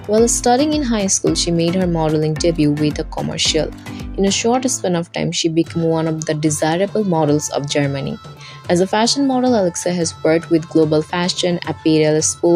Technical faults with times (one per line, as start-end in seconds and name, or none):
none